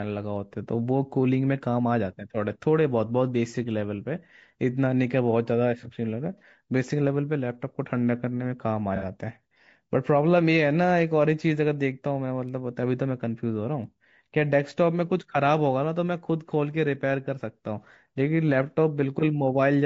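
Low-delay AAC compression runs through the whole speech clip, with plainly audible damage: the voice sounds rough and grainy, with noise filling the gaps between harmonics and a thin, somewhat synthetic upper band. This is likely AAC-ELD, the low-delay AAC variant used on video calls, running at a low rate that fits around 32 kbps. Its short frames separate closely spaced pitch harmonics poorly, so the available bits get spread thin.

AAC frame loss with concealment appears twice. From 6.38 to 6.42 s a gap of about 30 ms, consistent with a single missing frame, is patched by the decoder reusing the last good spectrum, which leaves a brief smeared, noisy blur. From 8.96 to 9.05 s a longer patch of about 60 ms, pointing to two consecutive lost frames, sounds phasey and smeared, because the last good spectrum is repeated over more frames before clean audio resumes.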